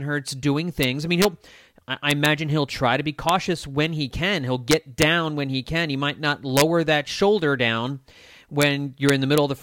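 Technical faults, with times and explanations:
0.83, 1.22–1.25, 2.11–2.26, 3.29, 4.71–5.03, 6.57–6.61, 8.62 and 9.09–9.38 s: integer overflow. Speech peaks pushed up to about 2 dB past the integer limit wrap to the opposite sign instead of being held, so each overshoot leaps across the full range and produces a violent crack, far sharper than clipping.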